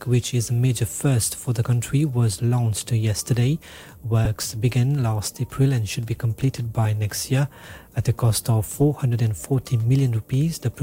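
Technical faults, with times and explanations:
4.25 s and 6.85 s, lost LE Audio frames: a brief noisy smear, about 7.5 ms each, consistent with one dropped frame concealed by the LC3 decoder reusing the previous spectrum with randomised signs.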